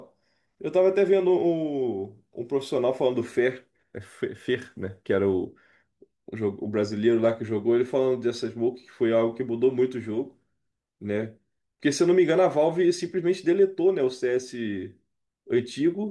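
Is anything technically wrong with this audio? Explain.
No, nothing technically wrong.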